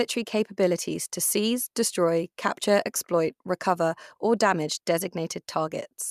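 Just a short bit of speech, and nothing technically wrong turns up anywhere in it.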